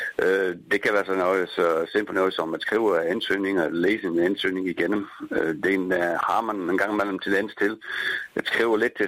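No technical faults can be heard anywhere in the recording.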